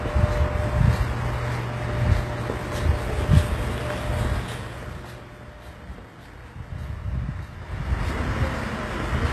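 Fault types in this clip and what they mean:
HE-AAC compression: Throughout, plainly audible codec damage and nothing above 12.3 kHz. The treble is likely rebuilt by spectral band replication, copied up from lower bands, so high detail sounds gritty and metallic, which fits a low bitrate near 16 kbps.
Zipper noise: From 7.52 to 8.17 s the level changes by about 15 dB in 2 dB jumps, around ten a second, with no smoothing between steps. Each jump leaves a small click, so the change comes across as rapid ticking over the sound.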